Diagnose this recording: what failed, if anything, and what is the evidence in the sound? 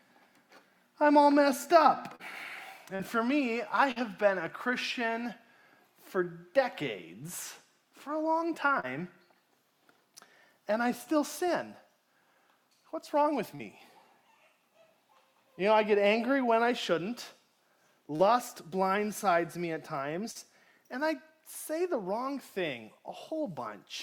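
Network stage: short concealed packet loss at 2.15, 2.95, 3.91, 8.80, 13.55, 18.16 and 20.31 s. Each time about 40 ms of audio arrived too late, and the decoder bridged it by extending the preceding sound. The result is a brief smear or wobble rather than the silent gap of an uncovered dropout.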